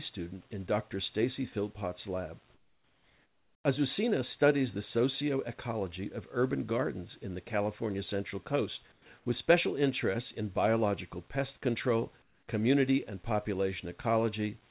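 In the pauses at 2.54–3.64 s, 8.92–9.06 s and 9.18–9.26 s (before "with special interests in"), and 12.22–12.48 s (between "in biological pest control" and "community and"), the background turns flat and featureless, mostly about 9 dB quieter. It is likely comfort noise standing in for the real background while transmission paused.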